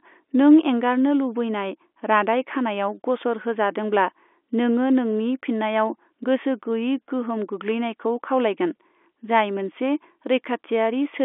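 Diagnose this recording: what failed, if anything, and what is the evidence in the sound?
Nothing stood out on listening to this telephone-band speech recording; no stage of the chain gave any audible sign of failure.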